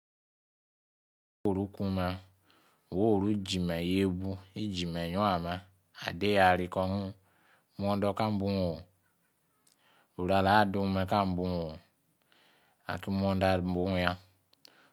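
Speech recording with a cut-off start: capture or streaming began late, so the file holds digital silence from 0.0 to 1.45 s and then drops straight into speech already under way at 1.45 s, with no natural attack or fade-in at the entry point.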